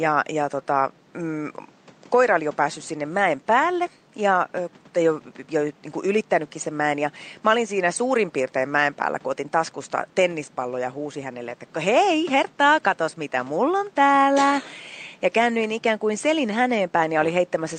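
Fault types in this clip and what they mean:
No system faults can be heard: the speech comes through intact, and the only background is the room's own noise, which sits about 30 dB below the speech.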